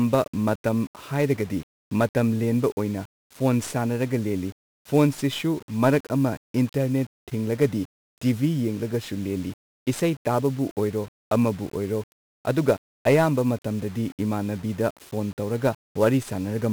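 Speech that sounds fuzzy and crackly throughout, its treble buried under broadband hiss. This is heavy 1-bit DFPWM compression: each sample's single bit nudges an adaptive level up or down, which fits roughly 48 kbps.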